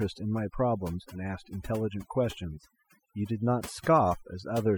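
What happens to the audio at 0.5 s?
Overdone noise removal is at work at 0.5 s, as it is throughout the clip. A noise reducer set too aggressively pushes individual frequency bands far down or shuts them off whenever they come close to its noise estimate, and the quieter components of the speech are removed along with the noise. The background drops and breaks up into twinkling, warbling specks.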